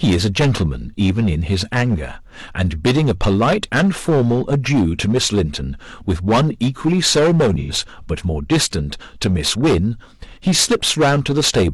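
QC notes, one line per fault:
Throughout, hard clipping: the speech is pushed about 15 dB past what the stage can pass, so the peaks get sheared flat on roughly a tenth of the samples. Those flat tops spray high harmonics, which is why every loud syllable carries that harsh, fuzzy edge.
7.60 to 7.71 s, AAC frame loss with concealment: about 85 ms of audio went missing, which fits two dropped frames. The decoder patched the hole from the last good spectrum, so you hear a brief smeared, noisy, phasey blur instead of a clean gap.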